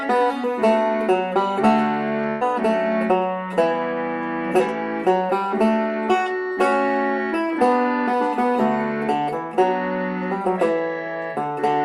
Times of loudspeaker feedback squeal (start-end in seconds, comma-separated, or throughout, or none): none